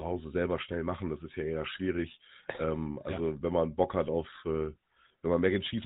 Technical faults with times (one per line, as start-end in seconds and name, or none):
0.00-5.85 GSM full-rate codec